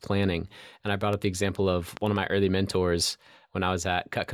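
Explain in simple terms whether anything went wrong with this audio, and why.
There are a couple of loud pops here. The first is a single sharp crack at about 1.13 to 1.15 s. The second is a quick double pop spread between about 1.97 and 2.18 s. Both jump well above the level of the speech, which keeps going underneath. A loud pop happens when a sudden electrical jolt gets added to the signal, most likely from a plug, a switch or static.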